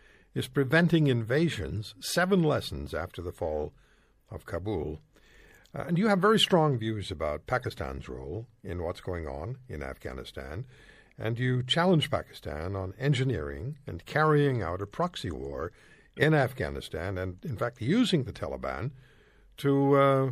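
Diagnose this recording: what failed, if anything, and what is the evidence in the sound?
MP3 compression throughout, at the codec stage: the speech sounds watery, with swirling s sounds, likely from MP3 encoding at a low bitrate near 64 kbps.

Corrupt frame decoded at 7.61–7.71 s, after "very strong views about", and 16.17–16.24 s, after "out a proxy war": brief glitches (about −30 and −15 dBFS) from damaged frames decoded with misplaced energy.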